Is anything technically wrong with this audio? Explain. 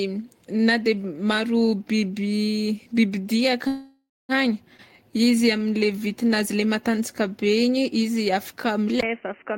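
Yes, there are three problems.

From 3.67 to 4.32 s there is a call audio freeze. The last sound is stretched into a fading buzz or hiss, then about 0.22 s of silence, and the speech resumes exactly where it stopped. The likely cause is delayed packets draining the jitter buffer, which inserted roughly 0.62 s of gap without losing any speech.

From 4.89 to 6.29 s, just before "le matanjaka", there is a jitter buffer slow-down. The speech drags at about 88% speed with its pitch unchanged, and sounds are drawn out. The receiver repeated single pitch periods and slivers of pauses to rebuild its reserve, adding 175 ms.

At 9.01 s, right after "izy afaka", the input switched to a poorer device. After a 20 ms dropout the sound turns dull and boxy to the end, with nothing above 3 kHz, a level drop of about 5 dB and a faint new noise floor well below the speech. A microphone change, likely to a headset's call profile, narrowed the band and brought its own tone and noise.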